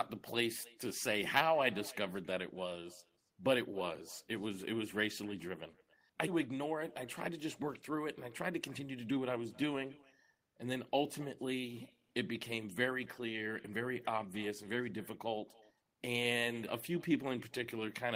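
With no echo canceller at the far end, the speech is picked up from that side's loudspeaker and sent back, so throughout the clip every phrase is shadowed by a thin copy about 24 dB quieter, arriving roughly 300 ms later.

At 6.27 s a skip ahead occurs. About half a second of audio was discarded while later packets were already waiting, and playback jumps straight across the gap with no fill, so the speech on either side is butted together abruptly.

From 6.36 to 9.30 s a jitter buffer speed-up follows. The buffer was still holding more delay than it wanted, so it repeatedly trimmed short pitch-period slices, removing around 150 ms in total. The speech runs about 5% fast at unchanged pitch and sounds slightly hurried.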